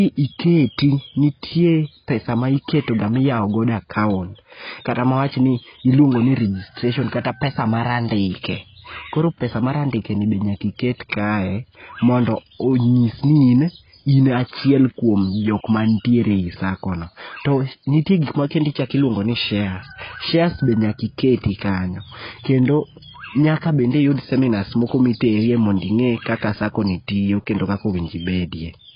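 From start to finish the speech sounds dull and smeared, with nothing at all above 5.1 kHz and a watery, warbling fizz on sibilants and held sounds. That's most likely heavy AAC compression, probably AAC-LC at a very low bitrate, around 16 kbps. Starved of bits, the encoder drops everything above the cut-off and quantises the remaining bands coarsely, so parts of the spectrum go missing or turn to noisy mush from frame to frame.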